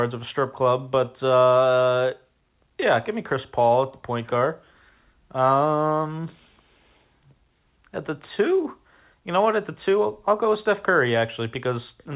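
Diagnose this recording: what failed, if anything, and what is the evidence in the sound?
Nothing failed here: the speech comes through the telephone path with its usual narrow band, and there's nothing in the sound that points to a fault at any stage.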